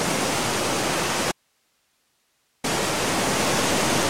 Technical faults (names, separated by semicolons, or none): audio dropout to a faint residue